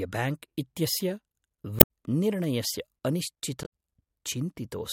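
At 1.79–1.86 s and 3.62–3.66 s, damaged data in a compressed stream makes the decoder misread frames and lose sync, giving brief glitches.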